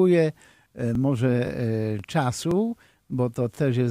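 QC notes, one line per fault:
0.43–0.45, 0.95–0.97, 1.47–1.49, 1.99–2.01, 2.51–2.53, 3.03–3.05, 3.55–3.57 s overlapping chunks: each join replays 20 ms of speech every 0.52 s, fitting 0.5 s chunks, giving a rhythmic click-stutter; the waveform shows a step and repeated 20 ms segment, and the spectrogram a thin vertical broadband line.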